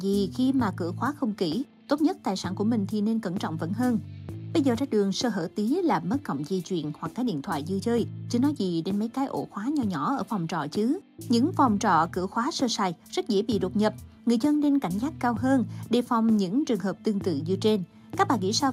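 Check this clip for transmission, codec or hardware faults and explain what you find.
No faults detected.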